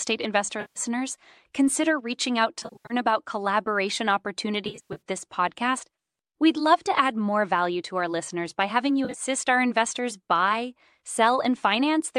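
AAC frame loss with concealment breaks up this speech clip four times. Frames went missing and the decoder filled each gap from the last good spectrum. From 0.61 to 0.80 s about 150 ms is lost. From 2.60 to 2.94 s, between "consider reaching out" and "about collaboration", 250 ms drops out in scattered runs. From 4.65 to 5.01 s, just before "this podcast", 230 ms is lost, and from 9.05 to 9.22 s, before "our investors buy", 90 ms. In the three later events the runs stay short, the longest around a tenth of a second in the 2.60 s stretch, so those gaps come across as smeared, phasey, noisy patches rather than silence. The slight graininess of the sound throughout likely comes from low-delay AAC compression.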